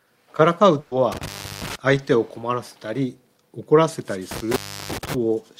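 A burst of packet loss, around 120 ms of stream that never arrived in time, hits from 0.79 to 0.94 s. The receiver stretches and fades the last sound across the hole, so a held buzz or thinning hiss replaces the missing stretch before playback jumps ahead. Two intermittent contact faults, a loose plug or cable briefly opening, follow at 1.12 to 1.76 s and 4.31 to 5.14 s. Each drops the signal for about 340 ms, with crackle at the edges and faint hiss in between.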